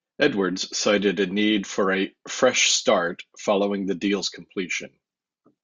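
Nothing goes wrong anywhere in this speech recording, so there's no technical fault to point to at any moment.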